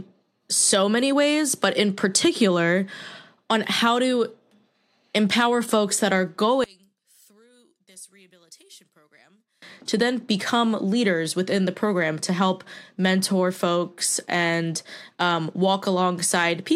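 From 6.64 s to 9.62 s, right after "empower folks that are", the speech almost vanishes, dropping by about 29 dB. What remains is a faint trace of the voice. Full level returns at "to then become leaders". This points to one channel inverted. With one stereo side's polarity likely flipped, the centred voice cancels when the two channels are summed to mono. Only the small difference between them survives.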